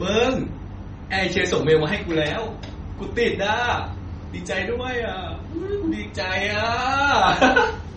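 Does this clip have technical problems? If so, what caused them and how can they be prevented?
Yes. MP3 compression throughout: nothing above 8.4 kHz, with watery, swirling artefacts where weak frequency lines drop in and out, likely from a bitrate around 32 kbps. Encode at a higher bitrate or keep a lossless copy.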